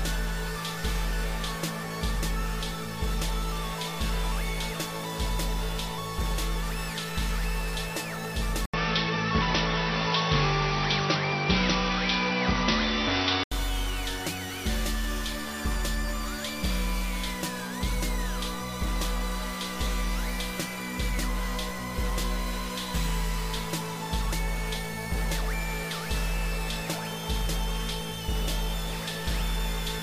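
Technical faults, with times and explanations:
8.66–13.52 s, input likely switched to a poorer device: after an 80 ms gap, sound turns dull, nothing above 5.8 kHz, level shifts about 5 dB, with new faint noise.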